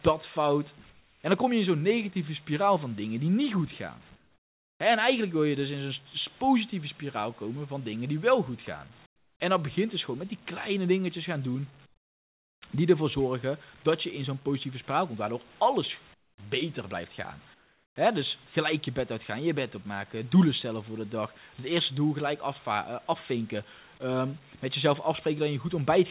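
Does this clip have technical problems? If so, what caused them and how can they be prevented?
Yes. Comfort noise in place of the background appears at 0.90–1.24, 4.16–4.80, 9.06–9.40, 11.86–12.62, 16.14–16.38 and 17.54–17.96 s. In these pauses the room tone gives way to a flat, featureless hiss about 8 to 24 dB quieter. The likely cause is discontinuous transmission: the receiver synthesises noise while the sender stops sending. Disabling DTX, or calibrating the comfort-noise level to the real background, prevents it.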